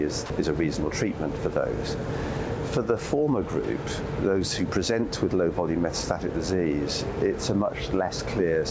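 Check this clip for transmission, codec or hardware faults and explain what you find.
One fault stands out, early in the clip. From 0.26 to 0.30 s, the sound drops out for 40 ms. A short stretch of steady, featureless noise takes its place, and the sound then resumes. This is sound dropped by the voice detector, likely. The sending side judged that moment to be background and stopped transmitting. The receiver filled the gap with generated comfort noise. The call path shows its G.722 character, with nothing above 8 kHz.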